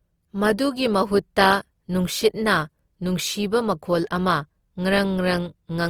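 Speech carrying Opus compression throughout, likely from a low bitrate around 24 kbps in music mode. The sound is grainy and rough, with band folding and noise fill. There are few MP3-style swirling holes, and content still reaches about 20.2 kHz, so this isn't a bandwidth-limited speech mode.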